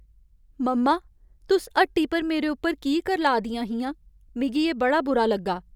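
No technical faults occur at any point in the recording, so there is nothing to place in time order.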